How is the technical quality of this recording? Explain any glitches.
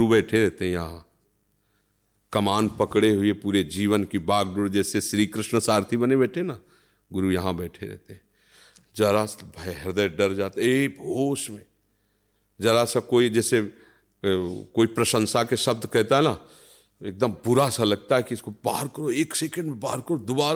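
No audible technical faults.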